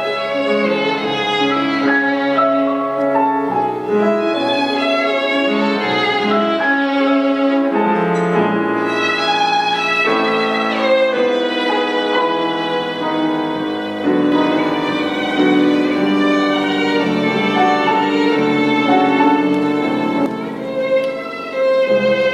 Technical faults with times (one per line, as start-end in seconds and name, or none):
14.32-20.26 doubled audio track